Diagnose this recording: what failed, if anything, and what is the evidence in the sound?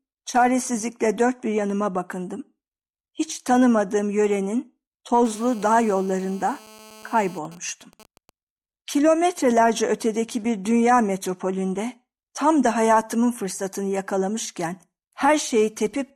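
A GSM phone buzz enters at the analogue stage, in the wiring or input circuitry, from 5.25 s to 7.39 s. It is a hard, raspy 217 Hz buzz with a dense harmonic series, about 25 dB below the signal and unrelated to it. A nearby 2G handset on an active call is transmitting bursts 217 times a second. The audio circuit rectifies that radio pulse train, turning it into a steady audible buzz.

GSM signalling bursts follow at the same analogue stage, from 7.45 s to 8.30 s. The continuous buzz gives way to even ticks with a longer 217 Hz buzz twice a second, at a similarly low level. The handset is still on the call, but with its user silent it sends only short groups of radio bursts instead of a continuous train. The circuit rectifies each group into a tick or a short buzz.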